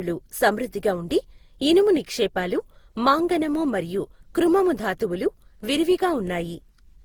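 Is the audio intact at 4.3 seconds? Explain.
No. At 4.3 seconds the speech carries generation loss, present throughout the clip: swirly, hollow and smeared, with blurred attacks. It is likely from about seven rounds of lossy re-encoding, consistent with Opus near 64 kbit/s. A spectrogram would show patchy holes and smeared onsets below 20.2 kHz.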